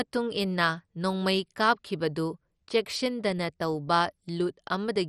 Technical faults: MP2 compression

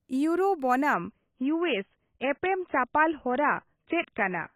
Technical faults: adaptive stream at a lower bitrate

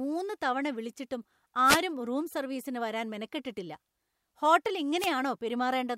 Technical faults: wireless microphone noise hit

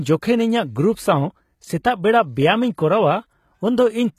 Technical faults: HE-AAC compression

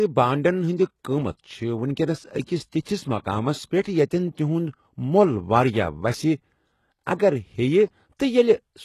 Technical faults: HE-AAC compression

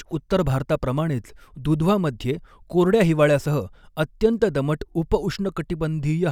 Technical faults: none

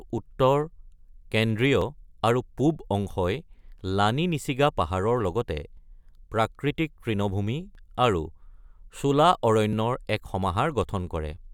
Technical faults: audio missing between chunks

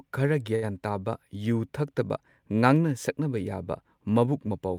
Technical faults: short stall from a late packet

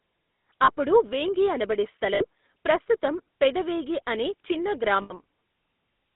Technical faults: GSM full-rate codec; lost GSM frames

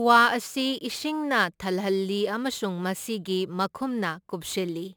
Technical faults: crude rate conversion

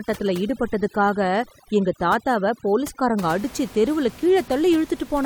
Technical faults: overdone noise removal

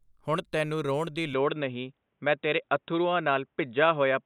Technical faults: input switched to a poorer device

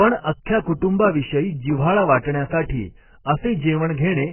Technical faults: AAC compression

